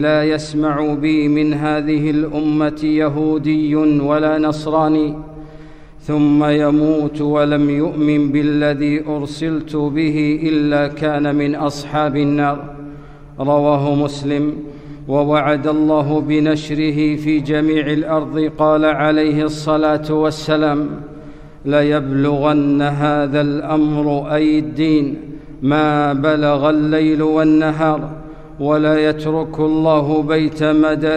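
No technical faults are audible.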